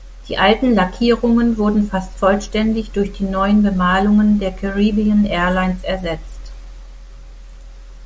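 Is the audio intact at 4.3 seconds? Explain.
Yes, the speech at 4.3 seconds is intact, with no dropout, click, distortion or other fault at that moment.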